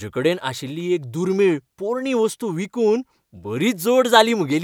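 Speech recording; no technical faults detected anywhere in the clip.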